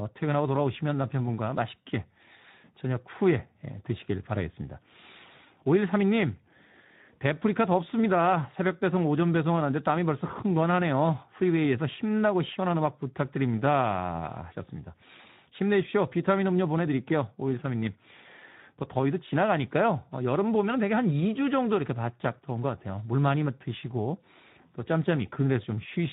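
Throughout the speech, Speex codec damage is plainly audible, with a hoarse, noisy quality, consistent with roughly 11 kbps. The CELP coder has too few bits for its excitation, so harmonics on a spectrogram look smeared and grainy rather than cleanly striped.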